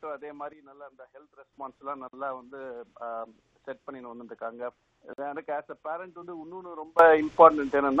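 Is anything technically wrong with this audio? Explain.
Yes. There are three kinds of fault.

Sudden gain jump, twice. At 0.53 s the level drops abruptly by about 9 dB. It stays down until 1.53 s, then snaps back. At 6.99 s it leaps up by about 19 dB and holds to the end. Sound and background noise move together, with no fade at any edge. The likely cause is a digital gain change applied between one sample and the next, without a ramp.

Gap between chunks, at 2.08 to 2.13 s and again at 5.13 to 5.18 s. Each is a 50 ms hole of silence with hard edges. The two holes sit 3.05 s apart, which fits audio delivered in 3-second chunks. Silence is left at each join before the next chunk starts. Nothing seems missing, but the flow is cut twice.

Damaged data in a compressed stream, at 6.21 to 6.23 s. A brief glitch breaks in here. It points to corrupted bytes in the compressed data. The decoder misreads those frames, loses sync and hunts for the next valid frame header. 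That produces the short glitch.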